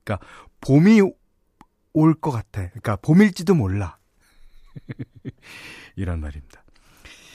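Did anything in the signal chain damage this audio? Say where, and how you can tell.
No, nothing damaged this audio.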